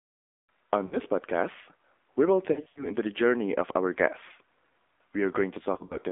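The whole clip passed through the AMR narrowband mobile codec at a low rate that fits 7.4 kbps. The line is squeezed to roughly 300 Hz to 3.6 kHz, and the speech sounds plainly buzzy and synthetic, with a thin, boxed-in tone.

Radio errors then caused lost AMR speech frames. The decoder patched each gap by repeating its last pitch and vocal-tract settings at falling gain. From 0.86 to 0.97 s, about 60 ms of speech smears into a brief warbling dip, which fits three 20 ms frames. From 2.52 to 2.92 s, losses totalling about 160 ms are scattered over 240 ms, and in the longest 80 ms stretch the sound drags out and sags before recovering roughly. From 5.74 to 5.98 s, about 80 ms is lost in short runs of up to 40 ms, giving repeated small warbles.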